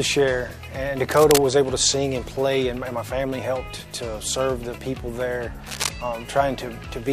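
At 1.11 s a burst of harsh, uneven scratching cuts in over the sound for about 0.3 s, and it comes back at 5.66 s for just under a quarter of a second. Both bursts sit only a few dB below the sound itself. That's cable scratch noise, most likely a worn lead or connector being shifted, so its contact resistance jumps around and spits ragged noise into the signal.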